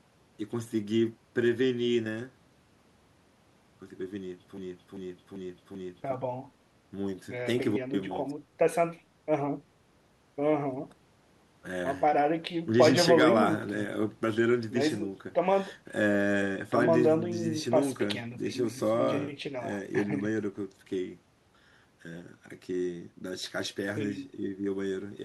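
A speech recording with a broken-record loop from 4.57 to 6.14 s. A fragment of about 0.39 s repeats exactly, four times back to back. The sound that belonged there is gone. The likely cause is a stalled player, encoder or stream resending its last buffer.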